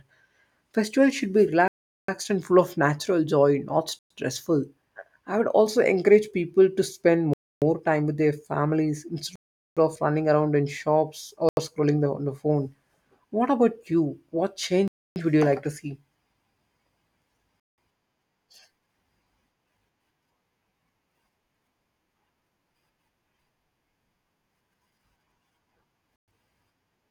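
Bluetooth stall dropouts cut the speech to dead silence eight times: at 1.68 s for 405 ms (after "should be"), 3.99 s for 115 ms (after "of natural joy not"), 7.33 s for 284 ms, 9.36 s for 411 ms, 11.49 s for 82 ms, 14.88 s for 282 ms (before "would you like to"), 17.60 s for 181 ms, and 26.16 s for 118 ms. Each gap is likely radio interference holding back packets until the headphone buffer ran empty, with sound returning once the resent data arrived.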